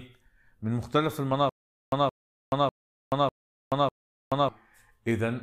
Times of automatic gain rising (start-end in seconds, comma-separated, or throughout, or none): none